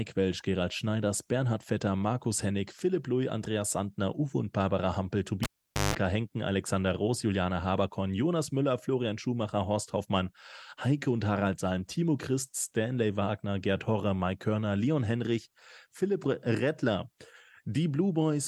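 At 5.43 s a live cable is pulled and plugged in: pop, 0.46 s flat-lined waveform, 0.16 s of 50 Hz buzz stripes, then a pop at 5.95 s.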